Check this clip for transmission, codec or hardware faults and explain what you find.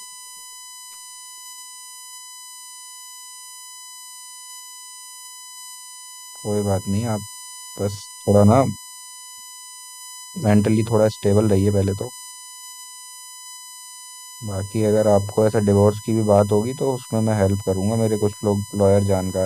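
Two faults are present: a constant electrical whine and two brief skips in the speech.

USB whine, throughout: current drawn in the bus's 1 ms frames leaks through power or ground, producing a fixed 1 kHz tone with harmonics strongest near 23 kHz, about 20 dB below the speech.

Compressed frames skipped, at 3.31 s and 6.29 s: damaged or missing 24 ms frames were not played. About a tenth of a second is lost each time, consistent with roughly four frames, and the speech jumps ahead at each join.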